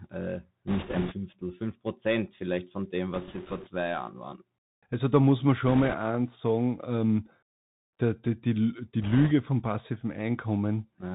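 Bluetooth CVSD headset codec, throughout: the narrowband sound fits a 64 kbps one-bit delta stream whose adaptive step lags loud, bright sounds. Nothing passes above 4 kHz, s sounds turn scratchy, and a plainly audible granular hiss sits beneath the speech.

Bit errors on a Bluetooth voice link, 0.68–1.16 s, 3.14–3.69 s after "vielleicht von dem", 5.68–5.95 s between "da muss man" and "sagen ähm", and 9.03–9.32 s before "vom passiven": flipped bits each nudge the waveform by an amount that grows with the speech level, so rather than clicks there is a rushing crackle, heaviest in the first burst.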